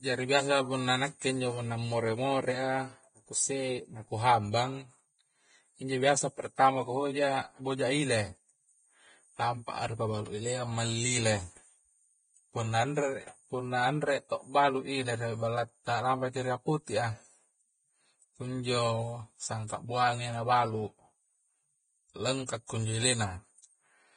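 Throughout, the speech sounds hissy and grainy with smeared consonants and nothing above 9.7 kHz, likely heavy Vorbis compression at a bitrate somewhere around 22 kbps.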